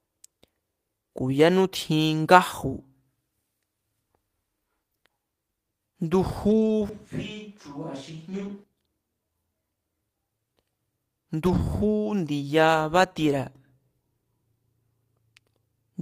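From 6.49 to 6.71 s there is a lost packet rebuilt from error correction. Roughly 120 ms of audio was lost in transit, and the decoder filled it from the low-bitrate backup copy carried in the following packets. The sound does not stop, but it turns briefly grainy and noisy. On a spectrogram the harmonics blur into a hazier band, while the waveform shows no gap.

At 6.89 s the sound jumps to a distant microphone, most likely because the close microphone dropped out. The audio becomes suddenly roomy and hollow, loses low end, and falls about 10 dB, with background noise rising to roughly 30 dB below the speech. It snaps back at 8.64 s. The waveform shows a step down in amplitude with a raised noise floor between the steps. The spectrogram shows thinner bass and smeared reverberant tails.

Inside that stretch, from 8.31 to 8.49 s, a second rebuilt loss of about 100 ms adds the same rough texture. 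A third follows at 11.45 to 11.59 s, about 80 ms long, and shows the same brief softening of spectral detail.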